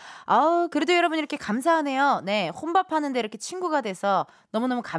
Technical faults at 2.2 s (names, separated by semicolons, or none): none